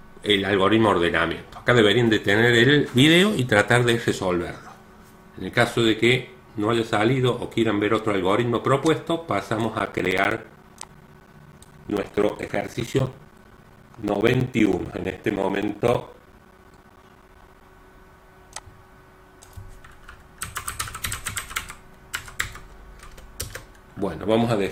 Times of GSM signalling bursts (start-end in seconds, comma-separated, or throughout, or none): none